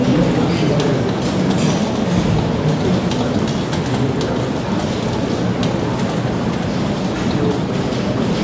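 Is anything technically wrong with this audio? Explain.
No, nothing technically wrong can be heard here.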